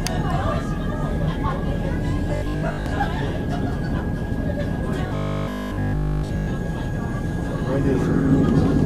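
Robotic sound from repeated short buffers affects the sound at 2.36–2.86 s, where most of the audio is replaced, and 5.07–6.47 s, where all of it is. A rigid 50 Hz buzz fits a 20 ms buffer likely being looped. Unlike steady mains hum, it appears only in these stretches.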